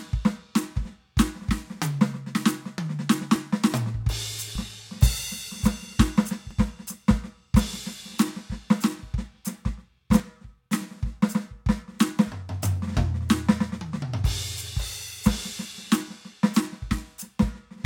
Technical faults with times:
0.85 dropped buffer (overrun)
3.36 dropped buffer (overrun)
4.55 dropped buffer (overrun)
6.51 dropped buffer (overrun)

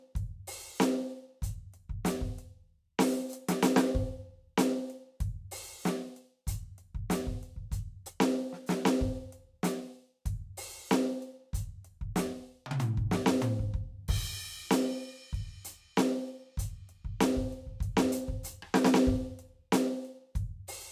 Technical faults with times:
none

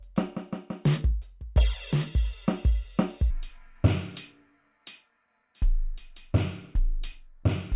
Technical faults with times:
3.31-7.76 wrong sample rate

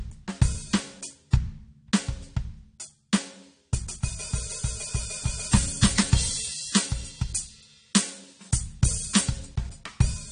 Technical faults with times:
0.00-10.31 AAC compression
5.52-9.45 pre-emphasis left on

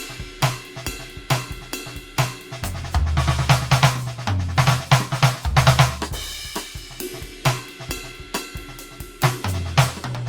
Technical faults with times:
0.00-10.29 generation loss

